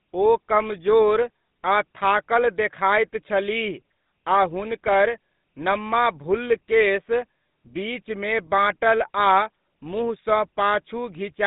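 Throughout the clip, the speech carries the sound of the GSM full-rate codec. Nothing survives above 3.8 kHz, and the line band runs from 150 Hz to 3.7 kHz. A crude pulse excitation leaves a plainly audible buzzy, gravelly roughness, which fits a 13 kbps rate.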